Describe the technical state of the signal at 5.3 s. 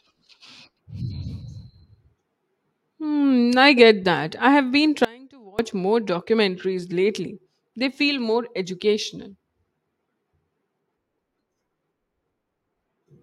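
An audio dropout to a faint residue spans 5.05 to 5.59 s, right after "that I have been", with the speech returning at "more documentaries lately". For about 0.54 s the speech cuts out abruptly, and only a faint leak of sound remains, roughly 25 dB below the normal level. The sudden edges set it apart from a natural pause or fade. The likely cause is a brief loss of the wanted signal while the path after the break stayed live.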